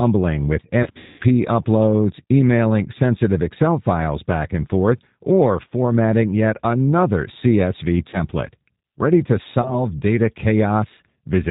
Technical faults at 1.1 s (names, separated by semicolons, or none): G.729 codec; VoIP packet loss concealed by the speech codec